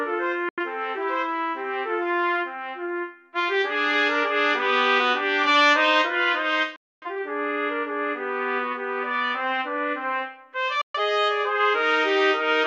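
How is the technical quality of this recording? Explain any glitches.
The recording has three short mutes, all digital broadcast dropouts, at 0.49–0.59 s, 6.76–7.07 s and 10.81–10.99 s. In each, the receiver silences the sound with a fade of about 3 ms and resumes later. The lost spans are about 85, 256 and 128 ms, which fits whole frames of roughly 43 ms failing. Unlike packet-loss concealment, nothing fills the gaps: no smeared repeats or crackle, just clean silence.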